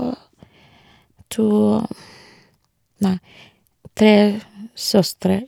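Listening to the speech, nothing stood out as a technical fault at any point.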